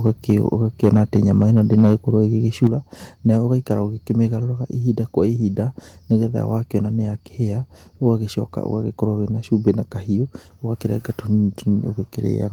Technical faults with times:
0.06-0.33 microphone overload
0.83-1.95 microphone overload
2.63-2.67 microphone overload
2.67 microphone volume stepped down

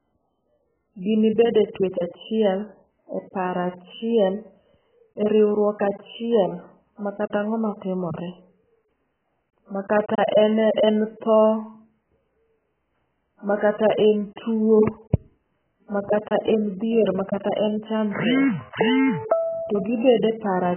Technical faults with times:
0.00-20.77 AAC compression

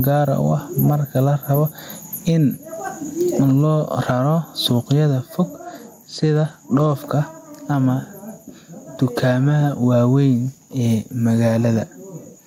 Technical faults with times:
0.00-12.46 gain pumping
5.57-6.93 Bluetooth SBC bit pool drop

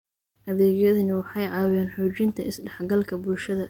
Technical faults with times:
1.61-1.75 lost packet rebuilt from error correction

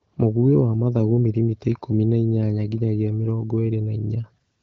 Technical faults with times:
none

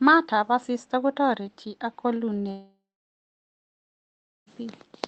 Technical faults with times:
2.51-4.48 long network dropout

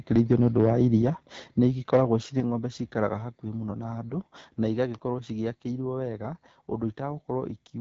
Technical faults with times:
0.00-7.80 AMR wideband (HD Voice) codec

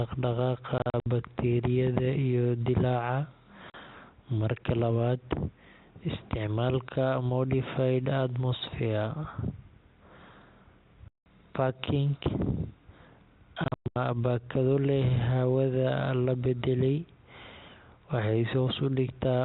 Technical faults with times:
0.78-1.06 packet loss filled with silence
3.70-3.74 packet loss filled with silence
11.08-11.26 packet loss filled with silence
13.64-13.96 packet loss filled with silence

